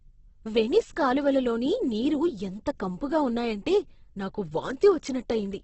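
From start to finish the speech sounds rough and grainy, with a dull, boxed-in top end. The likely cause is heavy Opus compression in its music-oriented CELT mode, at a rate that fits something around 12 kbps. With so few bits, the encoder keeps each band's energy but refills the detail with folded copies or noise, so the speech turns gritty with little swirling. On a spectrogram, energy stops dead at about 8.1 kHz, and the bands beneath look smeared and noise-textured.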